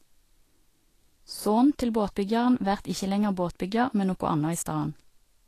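From start to finish the speech carries plainly audible damage that is likely Vorbis compression, consistent with a bitrate near 36 kbps. Nothing survives above 14.2 kHz, and the coarsely quantised treble turns into grainy hiss with roughened tones and blurred onsets, not the warbling swirls typical of MP3.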